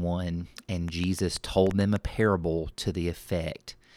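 Something in the chain, likely nearby equipment interference or a faulty connection or power supply, injects a train of clicks into this speech from 0.88 to 1.97 s: about seven similar pulses at an uneven pace near 6.5 per second, ticking roughly 10 dB above the speech.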